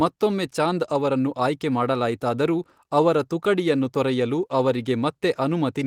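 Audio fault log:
No faults logged; the speech carries only the light coding texture of Opus voice compression, consistent with a hybrid fullband stream at around 24 kbps.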